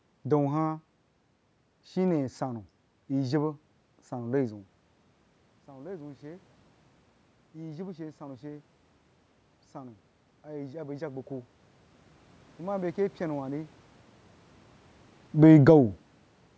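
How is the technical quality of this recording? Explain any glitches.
The speech carries two automatic gain glitches, each following a change in how close the talker is to the microphone. The sound tops out at about 8 kHz, as is usual for call audio.

Automatic gain rising runs from 5.66 to 13.77 s. The talker moves back around 4.5 s, dropping the input by about 18 dB. The gain control then slowly raises its gain by about 11 dB, so voice and room noise swell together. A talker simply moving would change the voice without lifting the background.

Automatic gain falling occurs from 15.28 to 15.72 s. The talker moves again around 14 s, and the control pulls gain down by about 4 dB. The sound sinks, taking the room background with it. That shared drop distinguishes it from the talker simply moving.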